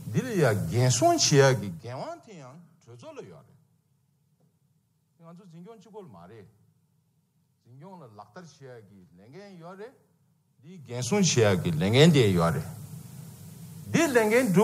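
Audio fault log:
10.68–11.22 s, zipper noise: a level change of about 25 dB is applied in hard increments, roughly a hundred jumps a second, instead of being ramped smoothly. Each jump puts a small discontinuity into the waveform, so for just over half a second the sound is overlaid with a fast ticking buzz, a rapid zip at around that step rate, which lasts exactly as long as the level is moving and stops once it settles.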